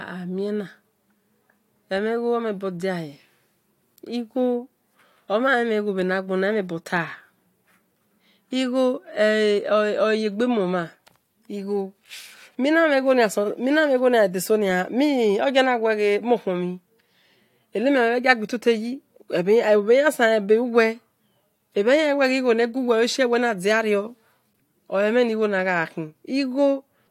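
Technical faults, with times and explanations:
Nothing stood out on listening to this speech recording.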